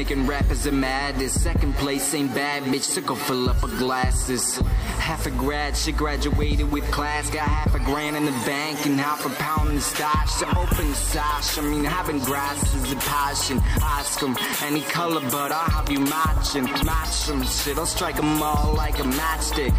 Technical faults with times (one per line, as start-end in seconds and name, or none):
8.31-19.66 train of clicks